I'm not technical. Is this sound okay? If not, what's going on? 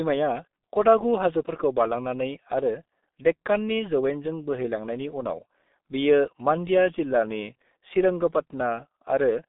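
No. The speech has been squeezed through the G.723.1 codec, an old internet-phone format, and the damage is heavy. It lasts the whole clip. Everything above about 3.8 kHz is gone, so the voice sounds muffled, like a poor phone line. The codec packs sound into short chunks and rebuilds the voice from a rough model. That makes it hoarse, and consonants such as s and t come out smeared.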